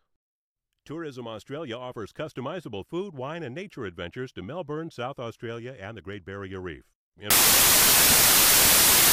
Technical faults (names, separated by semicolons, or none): samples built from the wrong bytes